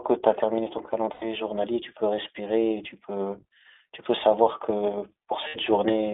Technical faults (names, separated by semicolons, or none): iLBC codec; lost iLBC frames